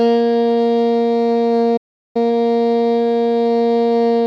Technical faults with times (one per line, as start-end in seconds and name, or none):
1.76-2.16 playback stall
2.16-2.90 time-compressed catch-up